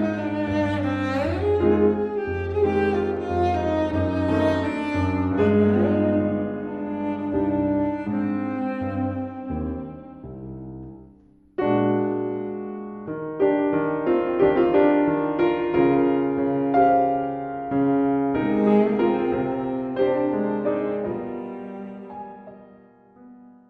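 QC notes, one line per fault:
Throughout, MP2 compression: the whole thing sounds dull and gurgly, with a grainy, watery edge that's plainly audible. The top end keeps dropping out and coming back as upper sub-bands run short of bits and get switched off, and what's left is coarsely quantised, hence the granular texture. It's likely a low-rate MPEG Layer II encode, and the damage level fits something around 80 kbps, the kind of thing you hear on thin digital radio.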